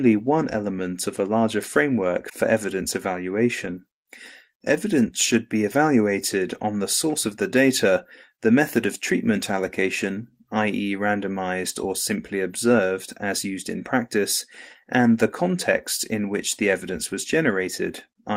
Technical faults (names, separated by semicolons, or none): none